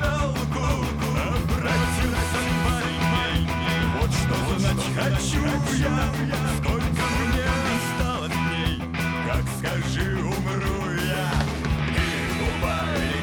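From 0.63 s to 7.77 s the signal is likely being captured twice, once through a slower second path that rejoins the mix, producing a doubled audio track. A full-band copy trails the original by about half a second at roughly 5 dB lower, with no reverberant tail or room colouring. Every event is restated as a distinct, slightly quieter echo, and the copy switches in and drops out abruptly at those two times.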